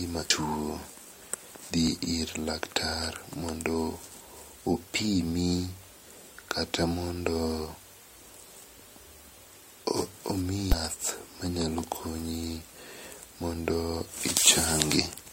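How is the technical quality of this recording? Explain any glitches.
Two brief glitches from damaged data in a compressed stream, at 0.29 s and from 10.72 to 10.74 s. Corrupted bytes made the decoder misread frames and resynchronise, giving short glitches that show as narrow disruptions on a spectrogram and abrupt waveform discontinuities.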